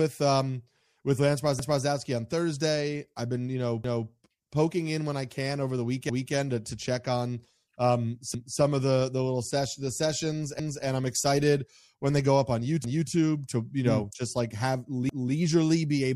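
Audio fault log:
1.59, 3.84, 6.09, 8.34, 10.59, 12.84 and 15.09 s: overlapping chunks. Every 2.25 s, about 250 ms of sound plays twice, giving a regular stutter. The audio appears to be cut into 2 s chunks, each starting 250 ms before the previous one finished, so every join replays that overlap.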